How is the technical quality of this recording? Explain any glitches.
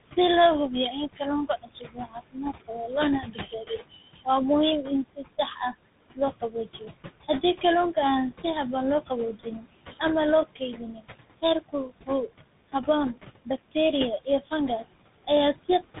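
Technical quality is fair to poor: three faults shape the sound, beyond a background of room noise sitting about 13 dB below the speech.

Noise suppressor artifacts run throughout. The suppressor pulls down bands it judges to be steady noise, frame by frame, by about 20 dB. The noise sinks between the words and rises under them. On a spectrogram the background looks patchy and mottled, with isolated flickering time-frequency cells instead of an even haze.

Tandem speech coding also runs the whole length. Two speech codecs in a row each re-encode the previous one's damaged output, and the character points to a GSM-type coder followed by CVSD. The result sounds rough, muffled and warbly. A spectrogram shows a hard ceiling with nothing above 3.8 kHz.

Speech cut by the noise suppressor occurs at 6.15–6.91 s, 9.07–10.01 s (after "si habboon loo", before "ama loo"), 10.55–11.06 s (after "ama loo"), 11.42–12.09 s, and 12.73–13.76 s (before "iyo fangas"). 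The suppressor mistook soft speech for noise and dropped it by up to about 13–20 dB, for a few hundred milliseconds per event or less. Consonants and endings sound swallowed. On the waveform, the envelope sags abruptly within words.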